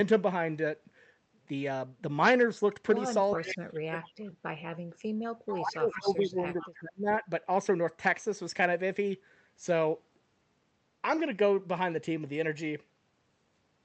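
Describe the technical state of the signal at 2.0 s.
At 2.0 s the signal is intact, with no fault present, only the ordinary character of the call path, whose codec limits the audio to about 8 kHz of bandwidth.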